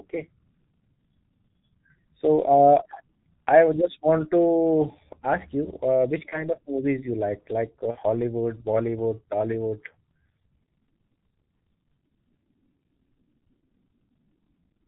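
From start to finish the speech carries heavy G.723.1 codec damage: sound is muffled and hoarse, consonants smeared, consistent with the 6.3 kbit/s mode. A spectrogram shows nothing above 4 kHz and blocky, slowly changing formants in 30 ms steps.

At 6.30 to 6.43 s and again at 7.91 to 7.96 s, VoIP packet loss is concealed by the speech codec. Each gap fits one lost 30 ms frame, filled by extrapolating the last pitch and filter. It sounds like a brief stretched smear that fades, with the speech staying weakened afterwards. On the waveform the envelope droops.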